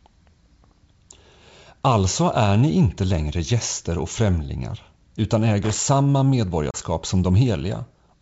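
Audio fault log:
5.63 to 5.82 s, loose connector crackle: about a fifth of a second of ragged scratching breaks through the speech. A worn or dirty contact is making and breaking as it shifts, chopping the signal into bits, and any DC on the line turns each break into a pop.
6.71 to 6.76 s, packet loss on an ADPCM call: a hard-edged gap of about 30 ms, likely from a few lost packets filled with silence. The decoder's predictor and step size drift from the sender's, so the speech comes back slightly distorted, then settles.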